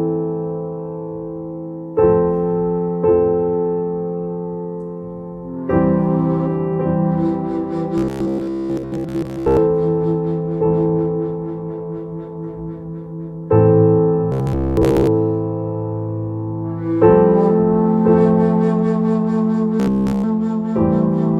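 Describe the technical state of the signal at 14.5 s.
At 14.5 s the signal shows robotic sound from repeated short buffers, running from 14.32 to 15.07 s. The likely cause is audio arriving too seldom. Playback fills the gaps by looping a short slice, and most of the real material in that span is skipped. The loop imposes a fixed buzz at 66.7 Hz, which fits a slice of about 15 ms. The sound turns rigid and metallic while loosely tracking the original.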